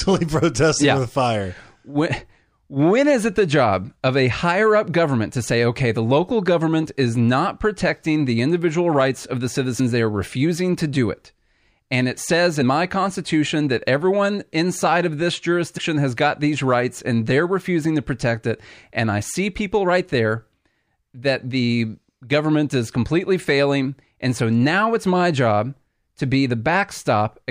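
This speech clip has compressed frames skipped in three places, where the decoder never played whole blocks of the compressed stream, either because they were missing from the file or because it rejected them as damaged. Playback jumps ahead by multiples of the 26.1 ms frame length. Around 9.79 s roughly 30 ms of speech vanishes, about one frame's worth. At 12.61 s around 70 ms is lost, and at 15.77 s about 100 ms, which fits three and four frames.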